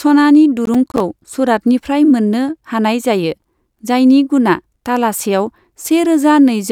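From 0.65 to 1.00 s gritty crackle tears through the speech. This is processor overload crackle: about ten buffers of roughly 10 ms missed their deadlines and dropped to silence.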